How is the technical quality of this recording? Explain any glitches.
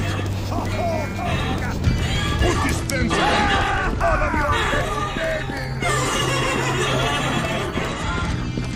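Quality is compromised by two Bluetooth SBC bit pool drops, at 2.76–4.36 s and from 7.88 s to the end. Fewer bits starve the upper sub-bands, dulling the treble and adding gritty quantisation noise, which fits the bit pool halving to about 108 kbps.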